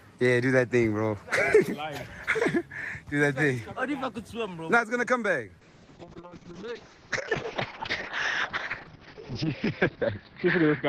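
At 5.62 s a call bitrate drop sets in and lasts to the end. The encoder, starved of bits, codes coarsely and cuts the band from 20 kHz to 6 kHz, which fits a fall from roughly 32 to 6 kbps. The sound turns muffled and watery. On a spectrogram, everything above 6 kHz vanishes.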